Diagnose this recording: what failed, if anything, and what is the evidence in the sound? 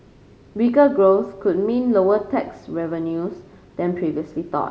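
Nothing in the chain appears to have failed: the speech signal comes through every stage, from wiring and conversion to buffering, processing, transmission, storage and playback, with no audible evidence of a problem anywhere in the recording.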